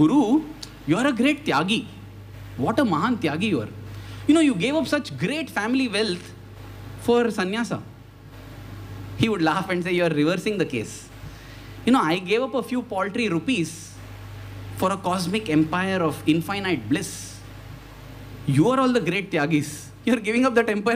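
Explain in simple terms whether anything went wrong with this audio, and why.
Nothing went wrong here: no technical faults turn up anywhere in the recording.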